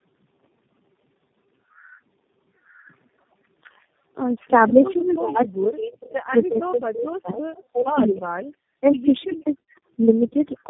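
Tandem speech coding runs throughout. The speech sounds rough, muffled and warbly, with nothing above 3.8 kHz, which fits several codecs in a row ending in G.729A, each re-encoding the previous one's damage.

Echo leak occurs at 4.87–5.15 s, 6.02–6.14 s, 7.53–7.64 s and 9.19–9.8 s. A faint copy of the speech returns 310–320 ms late, roughly 20 to 30 dB below the speech, likely loudspeaker echo the canceller failed to remove.

Speech suppressed in double talk occurs at 6.46–8.42 s, 8.79–8.85 s and 9.25–9.67 s. The speech dips by up to roughly 40 dB, likely because the echo canceller turned down its own talker along with the loudspeaker echo while both sides talked at once.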